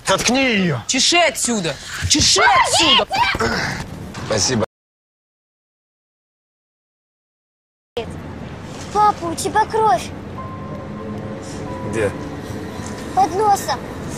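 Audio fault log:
4.64–7.97 s, audio dropout to silence: sound cuts out for 3.3 s of silence, flat-line waveform, blank spectrogram, no room tone; likely a lost input link.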